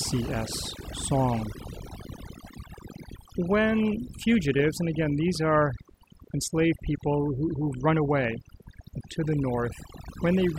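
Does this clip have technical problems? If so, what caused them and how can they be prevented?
Yes. Overdone noise removal runs through the whole recording. A noise reduction stage set far too aggressively cuts individual frequency bands down to almost nothing whenever they sit close to its noise estimate, and the quieter parts of the speech are removed along with the background noise. The gaps between phrases fall to near silence dotted with twinkling specks. On a spectrogram, the background shows as a dark field scattered with isolated bright dots, and the speech harmonics look patchy and broken at their edges. The waveform shows an almost flat floor between phrases. To prevent it, apply noise reduction gently in moderate steps and compare against the untreated recording, stopping before the speech itself starts to thin.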